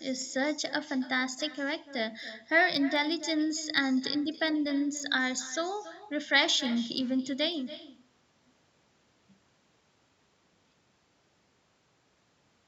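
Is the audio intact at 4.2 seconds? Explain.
No. At 4.2 seconds two faults overlap. The first is echo with no canceller, present through the whole recording. The far end's loudspeaker feeds the microphone, and nothing subtracts it, so each stretch of speech returns around 300 ms later at about 15 dB lower and thinner. On a spectrogram every syllable has a fainter duplicate shifted right by that gap. On the waveform, low-level copies trail each burst.

The second fault is a regular ticking that runs from 0.11 s to 12.66 s, covering 4.2 s. These are most likely clock slip clicks. Two unsynchronised clocks drift apart by around 700 ppm, so a single sample is dropped or repeated roughly every 30 ms. At that rate the ticks blur into a soft rattle, strongest on loud sustained sounds and gone in pauses. On a spectrogram they appear as evenly spaced thin vertical lines reaching up to the 8 kHz ceiling. 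On the waveform, zooming in shows tiny steps in the signal.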